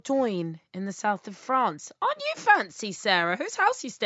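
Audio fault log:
Nothing stood out on listening to this speech recording.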